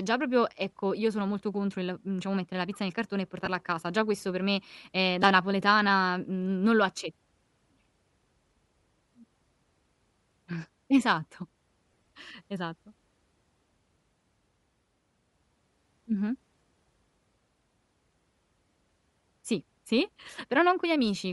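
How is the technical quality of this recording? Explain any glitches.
The recording has audible technical damage, with a constant codec coloring and three short dropouts.

Bluetooth LC3 compression affects the whole clip. The speech has a breathy, grainy edge in the upper range. The likely cause is the LC3 codec at a moderate rate, fitting about 48 kbps. It discards much of the high band and fills it with noise.

Lost LE Audio frames occur three times. At 3.45 to 3.47 s, between "pizza nel cartone e" and "a casa", about 15 ms turns into a brief noisy smear. At 5.22 s, between "questo per me ehm" and "napoletana n non lo", a shorter blip fits one lost 7.5 ms frame. From 11.92 to 12.01 s, about 60 ms of losses are scattered across 135 ms, with the longest gap about 20 ms. The decoder covers each gap by reusing the last spectrum with random phase, so the sound goes hissy and briefly rough.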